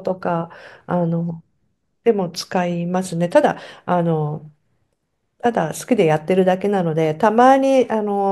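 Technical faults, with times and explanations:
No technical faults are audible anywhere in this speech recording.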